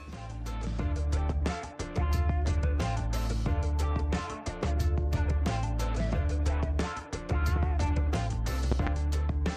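At 7.56 to 7.59 s there's a single loud pop, only a few dB above the sound. Then at 8.72 to 8.89 s comes a double pop, around 15 dB hotter. Both likely come from a voltage spike such as a plug or switch transient, and the sound carries on underneath.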